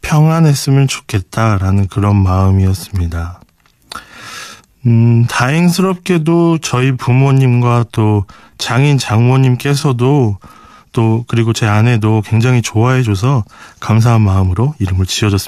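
Processing likely stretched the opening stretch of speech to run slower, about 0.74 times normal speed, while holding the pitch by repeating short slices. This time-stretched section runs from 0.0 to 10.8 s, sounding dragged until the pace abruptly returns to normal.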